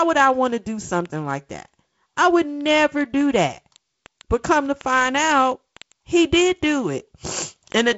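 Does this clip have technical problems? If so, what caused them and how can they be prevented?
Yes. Word clock ticks recur about every 0.05 s from 0.10 to 7.97 s as an unlocked receiver clock, roughly 500 ppm off, drops or repeats single samples. They show as evenly spaced thin vertical lines on a spectrogram. Locking the receiving device to the incoming digital clock prevents them.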